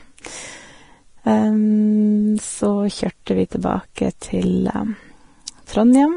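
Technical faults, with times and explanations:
Throughout: Vorbis compression. The speech sounds hissy and grainy, and nothing reaches above 10.5 kHz. The treble is quantised so coarsely that fine detail becomes noise. This heavy damage is likely from Vorbis coding and fits a bitrate near 31 kbps.
3.26 s, and 3.95 to 3.98 s: pre-echo. A brief hiss comes just before two sharp attacks. It spreads over 13 ms and then 23 ms. Each attack falls late in a coding block. Noise sized for the loud onset fills the quiet moment before it, smearing the attack.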